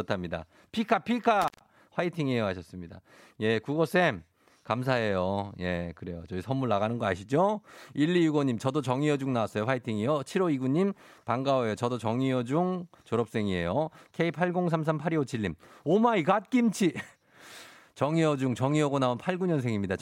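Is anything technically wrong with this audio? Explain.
Yes, there is an intermittent contact fault in the speech between 1.42 and 1.67 s. A loose cable or plug briefly lost connection, so the signal breaks up and opens for about 127 ms. Crackle at the edges of the gap sets it apart from a clean digital dropout.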